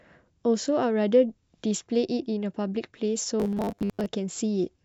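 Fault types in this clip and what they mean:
Robotic sound from repeated short buffers: from 3.40 to 4.06 s the speech becomes a rigid metallic 100 Hz buzz, likely from a 10 ms piece replayed while new audio lagged. Waveform: roughly repeating 10 ms cycles. Spectrogram: flat harmonics every 100 Hz.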